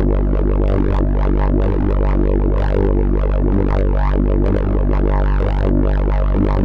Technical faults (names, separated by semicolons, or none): none